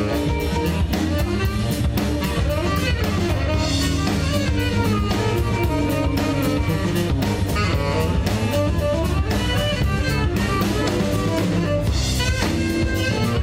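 A steady low drone at 50 Hz enters at 2.36 s and stays until the end, sitting only a little below the programme, roughly 5 dB down. This is mains hum: a ground loop or nearby transformer leaking the power-line frequency into the signal path.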